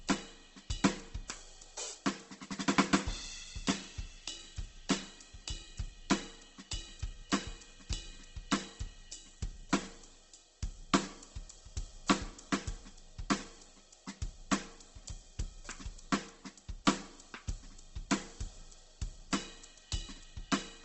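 Throughout, Opus compression is the likely cause: starved bands are noise-filled, so tones sound grainy and rough, and the spectrogram stops flat at 8.2 kHz.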